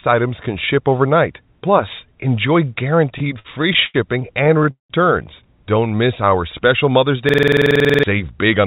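Between 3.18 and 3.96 s the speech runs into repeated stalls (stutter): seven short hold-ups, the longest 90 ms, fill about a quarter of that stretch. Packets arrived late, the jitter buffer ran dry, and the receiver stretched the last sound each time. A second burst from 4.44 to 4.915 s has five stalls covering about half the span, one lasting 188 ms and audibly fading. Nothing is skipped. The speech catches and drags in uneven jerks, unlike a smooth slow-down.

From 5.80 to 6.31 s a jitter buffer slow-down plays the speech at 89% speed, adding 65 ms. The receiver repeated single pitch periods and pause fragments to rebuild its reserve. The pitch stays put while syllables are drawn out evenly. Unlike the stalls, there are no hitches or fades, just a steady, slightly sluggish pace.

At 7.29 s a system hang loop begins and lasts until 8.03 s. A single 46.44 ms fragment, which fits a 2048-sample buffer, repeats exactly 16 times. 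The host froze while the hardware kept cycling its ring buffer. The result is a rigid machine-gun rattle at 21.5 Hz, and about 0.7 s of audio never arrives. Its mechanical, identical repetition sets it apart from the varied, softened fills of the stalls.

From 8.25 s to the end, a jitter buffer speed-up runs the speech at 108%. The receiver trimmed short pitch-period pieces to shed excess delay, a few hundredths of a second in all. The pitch is unchanged but the delivery sounds slightly hurried. This is the reverse of the earlier slow-down. All of this sits in a narrowband call path with nothing above 4 kHz, consistent with G.711.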